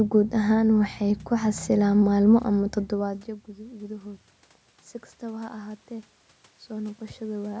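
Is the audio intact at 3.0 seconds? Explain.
No. Automatic gain rising runs from 2.54 to 4.31 s. The talker moved away and the input dropped about 21 dB, so the gain crept up about 5 dB, swelling voice and room noise together. On the waveform the envelope rises slowly, and on the spectrogram the noise floor brightens.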